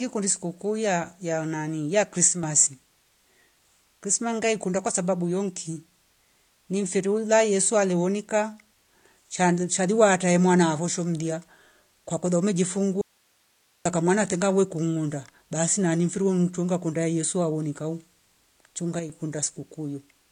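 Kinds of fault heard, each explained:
AAC compression: Throughout, the speech sounds dull and smeared, with nothing above 9.7 kHz and plainly audible codec damage. This is likely low-bitrate AAC-LC, which fits about 32 kbps, lowering the cut-off and coarsely quantising what remains against a hearing model.
One channel drops out: At 2.27 to 2.43 s and 18.99 to 19.10 s, the level falls abruptly by about 6 dB for a fraction of a second. This is likely one stereo channel vanishing, so the mono sum keeps only the other channel's share.
Audio dropout to a faint residue: At 13.01 to 13.85 s, the speech cuts out abruptly for 0.84 s, leaving only hiss roughly 40 dB below the signal. This is likely a lost feed with the downstream path still live, unlike a natural pause or fade.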